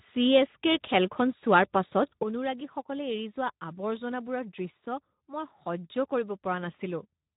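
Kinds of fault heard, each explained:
Speex codec: The speech has passed through Speex, a CELP codec from older VoIP and game chat, and the damage is plainly audible. The coding leaves too few bits for the excitation, so voices sound noisy and hoarse. Nothing survives above about 3.8 kHz, which gives the narrowband, telephone-like dullness. The artefact level fits a bitrate around 11 kbps, and it runs through the whole clip.
Sudden gain jump: At 2.23 s the level drops by about 10 dB in one step, with no fade, and stays down to the end of the clip. Speech and background noise fall together, which points to a change in digital gain rather than anything at the source. The likely cause is a gain setting or bit shift applied instantly instead of ramped, producing an abrupt step in loudness.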